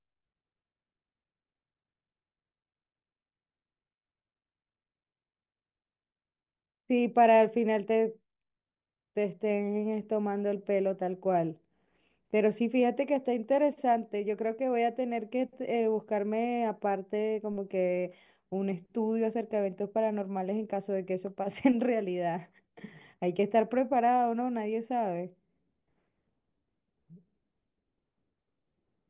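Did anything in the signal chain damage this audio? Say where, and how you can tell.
No, nothing in the signal chain audibly damaged this speech. At no point can any stage between capture and playback be heard altering the sound.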